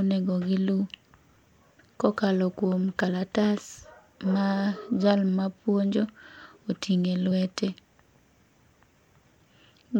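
Compressed frames are skipped at 3.07 s, just after "kokalo kuom", and again at 7.30 s. Each time the speech jumps ahead by roughly 30 ms, consistent with one dropped 26.1 ms frame. Overlap between neighbouring frames turns each join into a short smeared blip, not a hard click.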